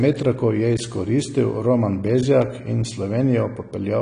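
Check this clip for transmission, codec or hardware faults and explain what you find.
The clip has one fault, AAC compression, heard throughout the speech. Nothing reaches above 10 kHz, so the top is dull. The damage is plainly audible, with smeared, fizzy sibilants. This likely comes from AAC-LC at a low bitrate, around 32 kbps, quantising coarsely and trimming the band.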